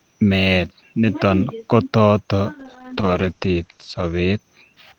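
From 2.61 to 4.45 s, after "met niton kotot", speech turns rough and muffled, losing everything above 8 kHz: a call bitrate drop starving the encoder of bits.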